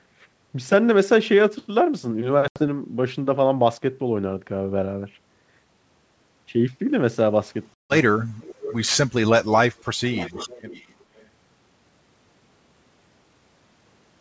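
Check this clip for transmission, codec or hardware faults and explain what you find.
Two faults are audible: packet loss on the ADPCM call and an echo leak.

Packet loss on an ADPCM call occurs at 2.48–2.68 s (80 ms lost) and 7.74–7.96 s (160 ms lost). Each gap has hard edges, and the speech then returns slightly distorted while the decoder's predictor and step size resynchronise. That recovery sets it apart from a plain dropout.

An echo leak runs from 8.42 to 11.26 s, at 8.42–8.89 s, 9.78–9.85 s, 10.06–11.04 s and 11.2–11.26 s. A copy of the speech arrives about 0.44 s late, at about 15 dB down in the longer stretches and about 35–40 dB down in the brief scraps. This is likely residue from a loudspeaker that the echo canceller missed. The long, fixed delay distinguishes it from room reverberation.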